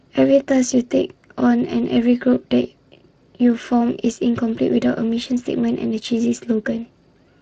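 A hoarse, grainy roughness sits on the speech for the whole clip, plainly audible from start to finish, with a noisy edge. This is Speex codec damage. Speex rebuilds speech from a predictive model plus a coded excitation signal, and when too few bits go to that excitation, the fine structure of the voice is replaced by coarse, noise-like detail. The degree of damage heard here fits a Speex bitrate of roughly 22 kbps.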